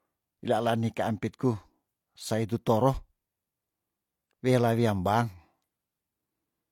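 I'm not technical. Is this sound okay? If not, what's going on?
No. The speech has the marks of low-bitrate audio saved at a high bitrate. Throughout the clip it carries the processed quality of heavy compression, and nothing sits above about 18.5 kHz. This most likely happened because the recording was first squeezed into a small, low-quality file and later re-saved as a larger one. Re-saving cannot bring back detail the first squeeze threw away, so the damage remains.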